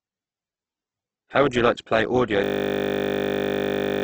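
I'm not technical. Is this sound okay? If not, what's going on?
No. The speech was likely squeezed hard by Opus compression, which saves space by discarding detail. Nothing above 8.1 kHz survives, so the speech sounds dull and muffled throughout, with a rough, grainy, noisy texture where clear tones should be.

At 2.44 s, right after "like to play audio", a system hang loop sets in. The computer froze while the sound hardware kept replaying one 20 ms scrap of audio, 50 times a second, to the end. This makes a steady buzz, and about a second and a half of speech is lost.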